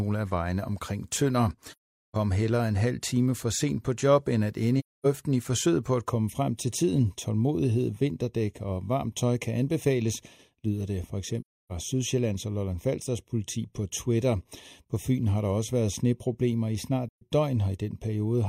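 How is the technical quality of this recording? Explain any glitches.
The recording has two kinds of fault: repeated dropouts and a hollow coloration over its last two thirds.

AAC frame loss with muting: the decoder lost blocks of compressed frames and zeroed them, so the overlapping windows fade the speech out and back in. This happens at 1.72–2.16 s (427 ms, just before "heller en halv time"), at 4.79–5.06 s (256 ms, between "på job end at" and "i forsøget på at"), at 11.40–11.72 s (299 ms), and at 17.09–17.23 s (128 ms). The lengths fit runs of roughly three to ten lost frames.

Channel delay (comb filtering): from 6.09 s, just after "i forsøget på at", to the end, one channel runs a fraction of a millisecond late before the mono sum. This cancels evenly spaced frequencies, the first near 1.5 kHz, so the speech sounds hollow and phasey.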